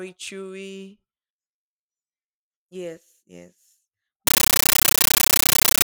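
From 4.27 s to the end, the speech gives way to very loud, chattering static: a compressed stream played as audio. An AC-3 stream went out as raw samples without decoding. That makes 13.3 ms noise bursts with silent padding, 31.25 times a second. This steady frame rhythm separates it from random digital noise.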